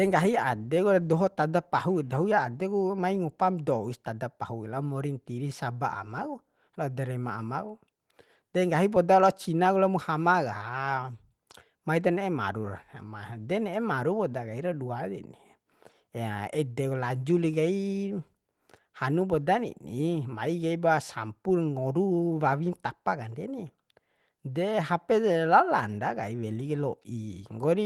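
No technical faults can be heard in the speech. The Opus voice compression keeps the full band, which points to the hybrid mode with a layer above 8 kHz at a rate around 20 kbps, and leaves only a light coding texture on the speech.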